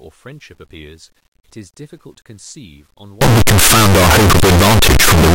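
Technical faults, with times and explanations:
3.21 to 5.34 s: signed and unsigned mixed up. From 3.21 s to the end, the speech becomes very loud, harsh distortion, with quiet stretches as loud as the rest. The likely cause is 8-bit samples read with the wrong sign convention. This flips the top bit, so each zero crossing jumps across the full range.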